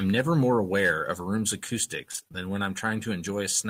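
Repeated packet loss hits this speech recording between 2.11 and 2.36 s: about half of that stretch was lost in quick succession, with each hole no longer than about 27 ms patched by extending the preceding sound, leaving choppy, robotic-sounding speech with fragments missing.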